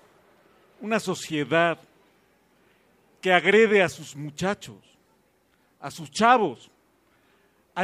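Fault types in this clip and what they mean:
No fault of any kind can be heard in the signal, which keeps an unbroken flow throughout.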